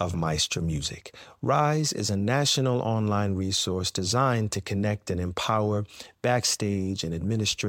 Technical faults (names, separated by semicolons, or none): none